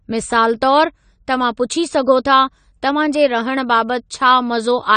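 From start to finish the speech carries AAC compression damage, likely from an AAC-LC encoder starved of bits. With too few bits per frame, the coder threw away everything above 9 kHz and quantised the remaining frequency lines coarsely, which fits a bitrate of around 32 kbps. The damage is plainly audible. The speech sounds dull and lacks air, and sibilants and held sounds take on a smeared, warbling, fizzy texture.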